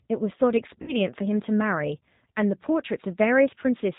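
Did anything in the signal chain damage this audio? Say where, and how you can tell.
Yes. At the codec stage, a low-rate speech coder that sounds like G.729 at about 8 kbit/s processes the whole clip. It rebuilds the speech from a filter and pulse model with nothing above 4 kHz, so throughout it sounds band-limited, slightly rough and synthetic.

At the network stage, VoIP packet loss concealed by the speech codec appears from 0.82 to 0.93 s. About 60 ms went missing, which points to two lost packets. The decoder stretches its last pitch and filter into a fading buzzy tone or coloured noise, and the speech stays weak or distorted briefly afterward.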